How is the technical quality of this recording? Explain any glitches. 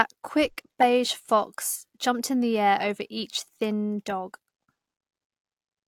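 Nothing in the recording comes across as a technical glitch, so there's really nothing here that needs explaining.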